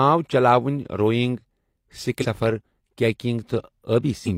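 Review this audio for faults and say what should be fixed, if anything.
Damaged data in a compressed stream occurs twice in this speech: bytes in the encoded file were lost or corrupted, so the decoder misread those frames, lost sync and hunted for the next valid frame header. Each break is heard as a brief chirp or blip, from 2.19 to 2.25 s and again from 4.23 to 4.29 s. Preventing it means storing and transferring the file with checksums or error-checked transport, then re-fetching any frames that fail verification.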